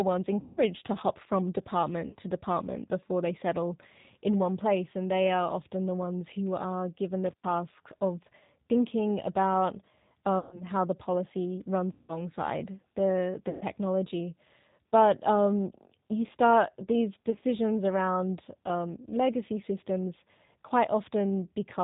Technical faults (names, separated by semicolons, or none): G.729 codec; VoIP packet loss concealed by the speech codec